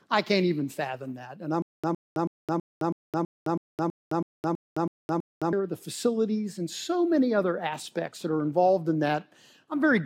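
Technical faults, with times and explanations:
1.62–5.53 s, stutter with silent gaps: one 112 ms burst repeats twelve times, 214 ms of digital silence between, likely a stalled stream; waveform shows identical blocks between flat silent stretches.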